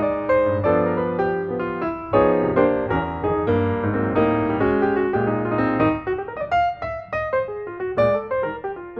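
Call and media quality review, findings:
No audible faults found in this recording.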